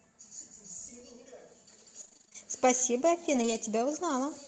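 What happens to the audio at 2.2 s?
Around 2.2 s the speech turns choppy and robotic, with small pieces missing, from 2.01 to 2.36 s. This is repeated packet loss: audio packets kept arriving lost or late, and each hole was patched by stretching the previous sound forward. The holes come in quick succession, none longer than about 25 ms, and roughly half the stretch is concealed rather than real sound. The call codec limits the bandwidth to 8 kHz.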